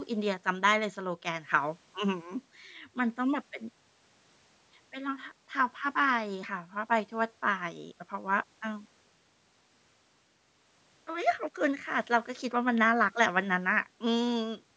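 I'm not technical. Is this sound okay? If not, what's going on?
Yes, no faults found; the speech carries the usual call-microphone processing, with the deepest bass trimmed and nothing above 8 kHz, which is normal for a call.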